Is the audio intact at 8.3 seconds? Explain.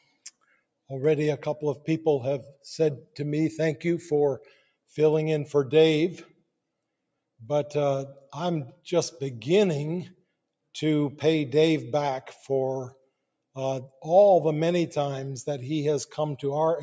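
Yes, the audio is intact at 8.3 seconds, with no fault at that moment.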